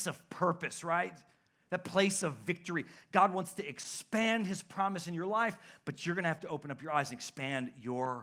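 Nothing in the speech recording stood out as a technical problem on listening.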